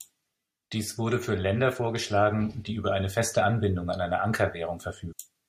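Damaged data in a compressed stream appears at 5.11 s, near the end of the speech, as a brief blip lasting under 20 ms. At this point part of the encoded stream was wrong, with bytes lost, zeroed or overwritten. The decoder could not read the affected frame properly, lost its sync and had to search forward for the next valid frame header. The misread data comes out as a short disturbance before normal decoding resumes.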